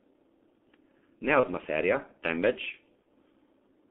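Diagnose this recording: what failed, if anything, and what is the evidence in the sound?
The codec stage is at fault throughout. The speech is band-limited to roughly 200 Hz to 3.5 kHz, hoarse and muffled, with smeared consonants, which points to G.723.1 at its 6.3 kbit/s rate. On a spectrogram, energy stops sharply at 3.5 kHz, and the formants look blocky in coarse 30 ms steps.

The network stage shows VoIP packet loss concealed by the speech codec at 1.40–1.48 s and 3.02–3.07 s. Each event fits a single lost 30 ms frame. The decoder repeats its last pitch and filter, so the sound turns briefly buzzy or noisy and dips. In the waveform, the periodic cycles repeat with shrinking amplitude, and on the spectrogram the harmonics run flat before recovering.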